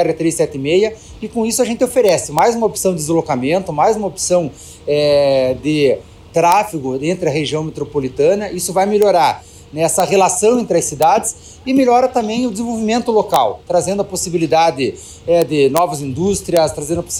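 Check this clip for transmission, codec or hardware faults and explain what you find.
The clip has integer overflow faults at eight points: 2.09 to 2.39 s, 6.52 s, 9.02 s, 10.0 s, 11.02 s, 13.34 s, 15.42 to 15.78 s and 16.57 s. Each one is a violent crack, harsher than clipping. A sample value exceeded the integer maximum and wrapped to the opposite sign instead of being held at the limit.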